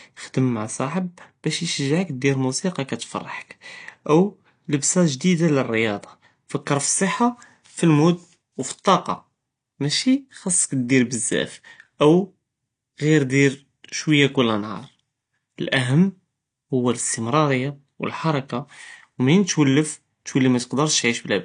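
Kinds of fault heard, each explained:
AAC compression: the speech sounds dull and smeared, with a warbling, fizzy edge on sibilants and held sounds, likely from AAC-LC coding at a low bitrate near 32 kbps. On a spectrogram, all energy stops at a flat ceiling around 9.8 kHz.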